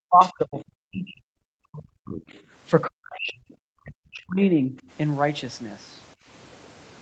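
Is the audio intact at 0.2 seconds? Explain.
No. At 0.2 seconds the talker's speech is being pushed down. This is speech suppressed in double talk, running from 0.02 to 1.33 s, with about a second of it affected. The level falls steeply, by roughly 40 dB at its deepest, so the voice thins and drops out in pieces. The likely cause is an echo canceller that could not tell the talker from loudspeaker echo while both sides spoke, so it turned everything down.

Right after, from 0.22 to 0.29 s, the other side's voice leaks through. A brief, faint scrap of a second voice sits about 20 dB below the speech. The talker's device plays the far end on a loudspeaker, and the likely cause is that the echo canceller left some of it in the microphone signal.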